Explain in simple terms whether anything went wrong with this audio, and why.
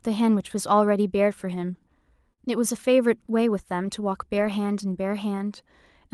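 Two small hiccups in this speech. At 2.33 to 2.39 s there's short concealed packet loss: about 40 ms never arrived, so the receiver stretched the previous sound over the hole, leaving a quick smear. Then from 4.37 to 4.47 s comes a lost packet rebuilt from error correction. It sounds like a few separate losses patched from rougher backup copies, so there's no gap, just a grainier, noisier stretch.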